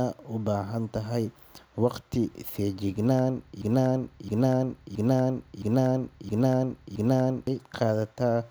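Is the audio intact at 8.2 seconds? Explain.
Yes, the speech at 8.2 seconds is intact, with no dropout, click or other fault at that moment.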